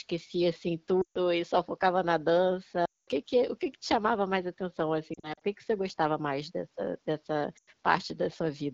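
Lost AMR speech frames: radio errors failed the frames' checksums, so the decoder reused its last good pitch and vocal tract settings with falling gain. At 1.01–1.18 s, before "e só focava na", then at 2.85–3.09 s and 7.57–7.70 s, after "gostava mais dessa dessa", the sound drops to near silence within two frames. Between 5.14 and 5.42 s, after "que chamava mais atenção", it gives scattered brief warbles instead.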